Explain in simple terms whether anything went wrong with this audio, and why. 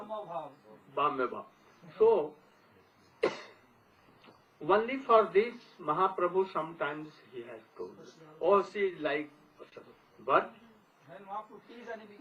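Something did go wrong. The timing of this audio wobbles, and there is one brief stall near the end.

The first problem is clock drift between sender and receiver. The device that sent the sound keeps time slightly slower than the device playing it, by roughly one and a half percent. That sounds tiny. But the receiver keeps running short of sound to play, so it has to keep patching the gap. You can hear this as small hiccups that come back at uneven moments.

Those patches are the second problem: repeated timing corrections. From 0.21 s to 8.93 s, the receiver keeps repeating short slivers of sound to stay in step. Together they play the sound about one percent slower than normal. Over that stretch they add roughly a tenth of a second. Each repair is small. Mostly you notice a slightly uneven, dragging pace rather than any single jump.

The third problem is a short stall from a late packet, at 9.69 s. 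One chunk of sound arrived late. The receiver had nothing new to play, so it held the last sound for 28 ms until the chunk turned up. Then it carried on from the same spot. Nothing is lost. You may just hear a sound hang on a moment too long, with a faint buzz or dip.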